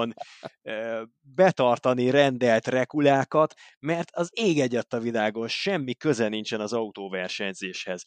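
No technical faults can be heard anywhere in this recording.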